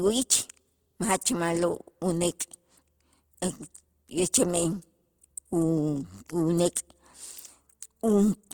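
Throughout the speech the sound is grainy and rough, with a noisy fizz replacing fine detail, though content still reaches 20.1 kHz. This is likely Opus compression in its music mode, filling bit-starved bands with noise, which fits a bitrate near 16 kbps.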